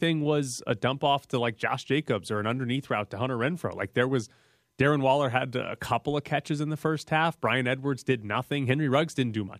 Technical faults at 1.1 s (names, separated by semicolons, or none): none